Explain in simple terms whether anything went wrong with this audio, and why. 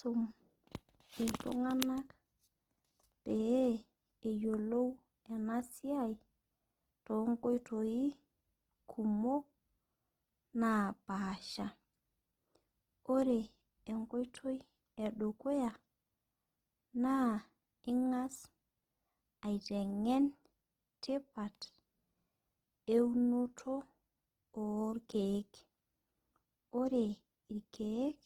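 Opus compression, throughout the recording: the speech sounds grainy and rough, likely because the encoder ran short of data and patched missing detail with noise.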